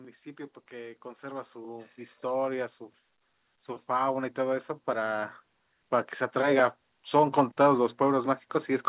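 Automatic gain rising twice: the gain control judged the input too quiet and lifted its level by about 10 dB from 0.05 to 2.83 s, then about 5 dB more from 3.86 to 5.37 s, so the speech and the background swell up together over those spans. Nothing reaches above 4 kHz, which fits a G.711 narrowband call path.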